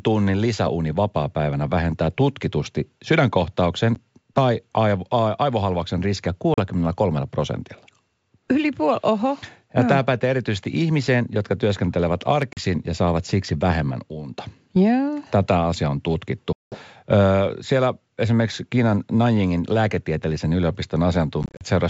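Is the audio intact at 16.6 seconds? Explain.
No: packet loss on an ADPCM call strikes from 16.53 to 16.80 s, leaving a hard-edged 190 ms silent gap. The decoder's predictor and step size then lose sync, so the speech returns slightly distorted.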